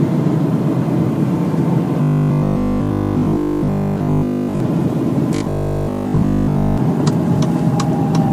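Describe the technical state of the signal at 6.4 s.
At 6.4 s the signal has robotic sound from repeated short buffers, spanning 5.36 to 6.78 s. The audio is replaced throughout that span by a rigid metallic buzz at 50 Hz. The likely cause is a roughly 20 ms buffer being replayed while fresh audio is skipped.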